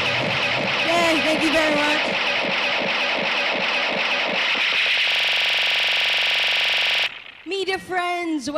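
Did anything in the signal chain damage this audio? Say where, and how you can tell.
Yes: a system hang loop at the driver/buffer stage, 5.11 to 7.06 s. The system froze and one 42.67 ms block, consistent with a 2048-sample buffer, replayed 46 times at 23.4 Hz.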